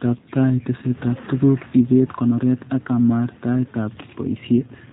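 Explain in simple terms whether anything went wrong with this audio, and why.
The whole recording passed through the G.729 codec, a phone-call squeezer that rebuilds speech from a rough model, leaving it muffled above 4 kHz and slightly rough and buzzy. Unlike simple muffling, it sounds synthetic.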